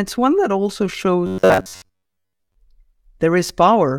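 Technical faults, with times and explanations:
1.26 to 2.55 s, robotic sound from repeated short buffers: just after "one that also", the speech collapses into a rigid, metallic buzz pitched at 93.8 Hz that only loosely tracks the words. The likely cause is audio arriving too slowly, so playback keeps looping the last fragment, about 10.7 ms long, while most of the real signal is skipped. That fixed repeat rate is heard as the steady buzz.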